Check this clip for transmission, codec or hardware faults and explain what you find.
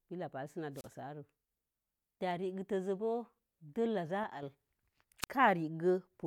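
Three faults turn up: two wireless microphone squelch dropouts and one brief channel dropout.

From 0.74 to 0.88 s, and again from 5.21 to 5.27 s, hiss swells, the speech vanishes into near silence for about 32 ms and then 29 ms, and it returns. This is a wireless microphone squelch dropout: the FM signal fades and the receiver's squelch mutes it.

Between 4.24 and 4.43 s the speech abruptly drops about 6 dB in level and then recovers. The likely cause is one channel dropping out, so that the mono sum loses half of the content shared by both channels for that stretch.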